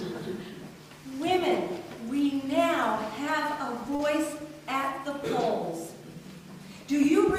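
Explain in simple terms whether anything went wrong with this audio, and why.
At 3.95 to 4.01 s there is a short stall from a late packet: one packet arrived late, so the receiver held the sound about 38 ms, then continued without loss.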